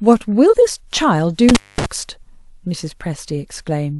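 At 0.49 s the decoder drops roughly one compressed frame, about 46 ms long: compressed frames skipped, so the speech jumps ahead. From 1.49 to 1.86 s an intermittent contact, a loose connection opening for about 219 ms, cuts the speech out, with crackle at each edge and faint hiss in the gap.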